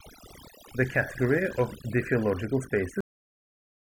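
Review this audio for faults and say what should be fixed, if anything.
Overdone noise removal runs through the whole speech clip. The reduction was set so hard that individual frequency bands near the estimated noise floor are pulled right down, taking the softer parts of the voice with them. The pauses fall to near silence with twinkling specks. Low-bitrate codec swirl would leave the background hiss in place, but here the hiss is stripped away. Lower the reduction amount and let some floor remain.

A cut-off end arrives at 3.01 s, just after "category of diffeological". The sound stops mid-utterance and drops straight to digital silence with no decay, and the silence lasts to the end of the clip at about 4 s. The final buffers were never written out. A dropout would resume after a gap, and a fade-out would taper, but this does neither. Flush and close the writer properly before the file is finalised.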